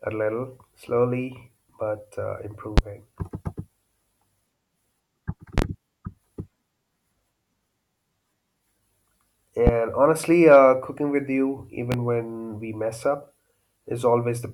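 Sharp loud pops jump well above the speech at 2.78–2.81 s, as a quick double pop at 5.58–5.66 s, at 9.67–9.71 s just before "honestly uh cooking with", and at 11.92–11.96 s between "uh cooking with you" and "when we mess up", while the speech carries on underneath. Each is likely a sudden voltage pulse from a plug, switch, static discharge or driver glitch entering the signal path.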